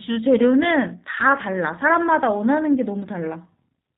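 G.729 codec damage runs throughout this short speech clip, from the first sound to the last. The speech is rebuilt from a vocal tract filter, a pitch predictor and a few pulses per 10 ms frame rather than carried as a waveform, so it comes across as plainly rough and synthetic, with nothing above 4 kHz, which fits an 8 kbit/s low-rate VoIP encode such as G.729A.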